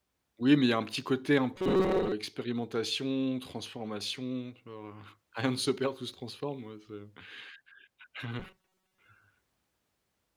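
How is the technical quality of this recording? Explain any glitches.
Two short stretches of robotic sound from repeated short buffers affect the speech, at 1.56 to 2.13 s and 8.40 to 8.99 s. In both, the speech turns into a rigid, metallic buzz at about 188 Hz that still loosely tracks the syllables. This likely comes from the playback repeatedly reusing a buffer of roughly 5.3 ms when new audio arrives too slowly. That repetition imposes the fixed 188 Hz pitch and replaces most of the real signal in those spans.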